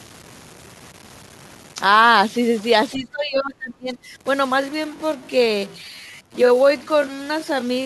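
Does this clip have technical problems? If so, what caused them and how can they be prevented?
Yes. Throughout the clip there is a distortion riding on the speech, and the pauses carry a gritty noise floor instead of falling silent. This is most likely a stuck bit, with one data line of the converter or interface held at a fixed value. Roughly half the samples are then off by that bit's weight, following the shape of the waveform. Ordinary clipping would distort only the loud peaks, but this fault also fills the quiet gaps. Checking the cabling and the converter with a test tone prevents it.

From 2.95 to 3.98 s the talker's level sinks, at its deepest by about 25 dB, over roughly a second. This is likely speech suppressed in double talk: both ends spoke at once, and the echo canceller could not separate the local voice from loudspeaker echo, so it attenuated both. A dropout would cut the sound abruptly to silence, while this dip follows the overlap and leaves the speech partly audible. 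A headset or an echo canceller with proper double-talk detection prevents it.

From 4.56 s to the end, the pace suddenly slows to 0.678 times normal while the pitch stays put. This is likely a time-stretched section, where software lengthened the audio to fill a duration by repeating short pieces. A slowed tape or a wrong sample rate would lower the pitch along with the speed, but here the pitch holds. Avoiding automatic length-fitting on speech prevents it.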